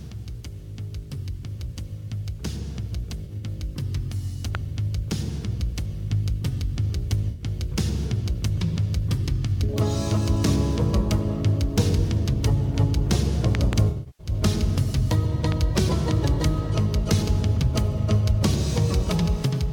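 A grainy, gritty distortion runs through the whole clip and moves with the sound, roughening quiet passages and making the softest moments sputter. It sits roughly 40 dB below the signal. The likely cause is low bit depth without dither: the audio was rounded to a coarse grid, consistent with about 9 bits, and with no dither the rounding error stays tied to the waveform instead of spreading out as steady hiss.

From 3.25 to 3.43 s a short smeared, phasey patch breaks the sound into brief noisy fragments. This is AAC frame loss with concealment: about 85 ms of data went missing, scattered over roughly 170 ms, with the longest gap around 40 ms. The decoder covered each gap by reusing the last good spectrum, which fits about four lost frames.

At 4.55 to 4.57 s a sharp loud pop jumps out about 15 dB above the sound, which carries on underneath. It is likely a sudden voltage step or pulse added to the signal.

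At 7.30 to 7.44 s a second smeared patch of AAC frame loss with concealment covers about 85 ms of missing data.

Between 13.55 and 13.75 s two pops land in quick succession, again about 15 dB above the signal.

From 13.89 to 14.31 s comes the longest concealment patch. About 277 ms are lost across roughly 341 ms, with one run near 100 ms.

Between 15.52 and 15.79 s another pair of pops, about 10 dB above the signal, cuts through.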